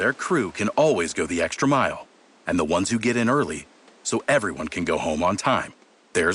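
No technical faults can be heard anywhere in this speech recording. The room noise sits at a low level, about 30 dB below the speech, as part of the recording itself.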